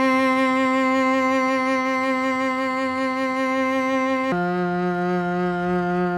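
Likely a clock mismatch slows playback to 0.68x from 4.32 s onward, a section at the wrong speed: the music sinks about seven semitones, sluggish and deep.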